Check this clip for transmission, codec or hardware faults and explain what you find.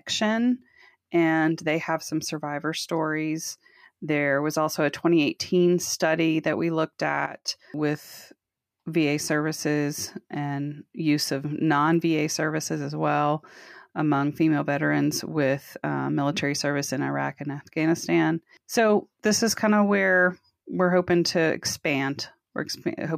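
One fault: a sudden gain jump from 7.26 to 7.48 s, right after "study that we looked". The level drops by about 12 dB in a single step, likely a digital gain change applied without a ramp. The background noise falls together with the speech, which sets it apart from a compressor's gradual pumping.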